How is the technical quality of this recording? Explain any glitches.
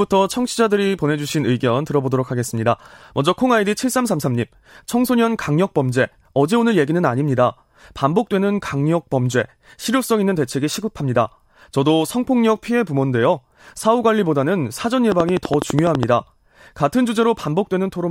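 The recording has one clear glitch. A train of clicks runs from 15.12 to 16.04 s: around ten evenly spaced pulses at 12.1 per second, likely from interference by nearby equipment or a faulty connection or power supply. They're heard as regular ticking, each click standing well above the speech level.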